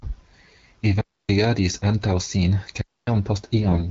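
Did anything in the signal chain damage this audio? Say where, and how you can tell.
Yes. Two clean holes of near silence, from 1.01 to 1.29 s and from 2.81 to 3.07 s, each roughly a quarter second, with no noise burst either side. This is a digital wireless dropout on the radio link. The receiver lost too much data and muted with a very quick fade.

From 3.62 to 3.89 s the speech keeps its pitch and level but turns hoarse, scratchy and gargly. These are AMR bit errors from a weak network link, heard through the AMR-WB (HD Voice) codec. Roughly a tenth of the less protected bits flipped while the checksum on the key bits still passed. That put the excitation pulses in the wrong places and skewed the pitch, gain and spectral values over what sounds like about nine frames.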